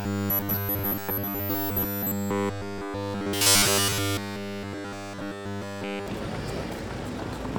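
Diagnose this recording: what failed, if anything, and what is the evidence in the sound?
From about 0.01 s to 6.07 s the sound is a rigid, metallic buzz at a fixed 100 Hz that loosely tracks the original, which is robotic sound from repeated short buffers at the driver or buffer stage. The likely cause is input arriving too slowly: the software keeps replaying its last chunk, all of the output is repeated material, and the 100 Hz pitch points to a repeated 10 ms buffer.

At 0.79 s, 2.78 s and 6.79 s there is a brief click or skip where the waveform jumps. This is overlap between stream segments at the playback stage. Segment timestamps overlap, and the player trims the shared span even though that audio was not actually duplicated, so under 20 ms of real sound is lost at each join. The spacing of these events fits 2 s segments.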